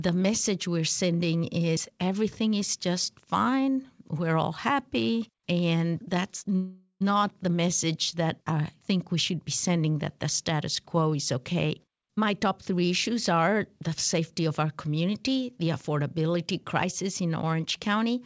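At 6.56 s the sound stops moving forward and is stretched into a fading buzz that runs until 7.03 s, the last 80 ms of it silent. This is a call audio freeze, most likely from packets held up in transit so the jitter buffer ran dry and the receiver filled about 0.45 s on its own. Unlike a dropout, nothing is lost. The audio resumes exactly where it stopped, so the pause is inserted and everything after it arrives that much later.

From 11.70 s to 14.60 s the audio runs hurried, at about 115% speed, with the pitch unchanged. This is a jitter buffer speed-up. The buffer held more audio than it targets, so the receiver cut many short pitch-period-sized slices in a row, roughly half a second in total, to win back the delay. A resampling or tape-speed error would raise the pitch along with the tempo. Here only the pace changes. Throughout, the G.722 call path leaves nothing above 8 kHz.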